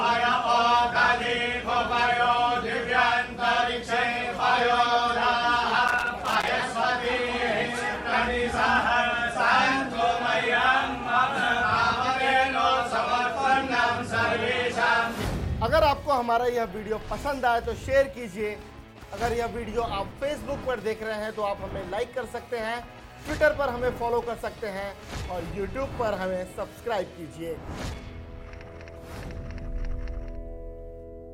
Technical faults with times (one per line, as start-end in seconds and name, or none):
5.88-6.48 loose connector crackle
27.88-28.02 loose connector crackle